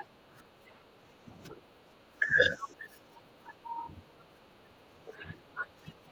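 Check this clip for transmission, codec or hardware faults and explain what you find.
A single fault affects the whole clip: speech suppressed in double talk, from 0.0 to 6.12 s. With both sides talking at once, the echo canceller likely mistook the talker for loudspeaker echo and attenuated both. The speech dips in level, falling by as much as roughly 15 dB.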